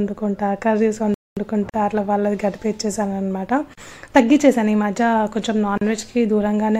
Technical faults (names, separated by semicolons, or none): playback stall; gap at a join of encoded pieces